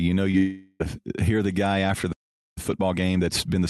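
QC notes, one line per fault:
0.31–0.35 s, short concealed packet loss: 20 ms never arrived and was synthesized from the preceding sound, heard as a brief smear; spectrogram shows slightly blurred harmonics.
0.37–0.82 s, long network dropout: the sound dissolves into a fading buzz-like continuation for about 0.42 s, likely from lost packets; the waveform shows decaying, repetitive energy without flatlining.
2.12–2.58 s, playback stall: output stops mid-flow for about 0.44 s, likely a starved or blocked player; the waveform is a flat gap and the spectrogram a blank column.
2.58–3.70 s, time-compressed catch-up: the audio runs hurried at 1.25× with unchanged pitch, as small pieces are cut out and cross-faded; the spectrogram shows compressed syllable spacing and steady formants.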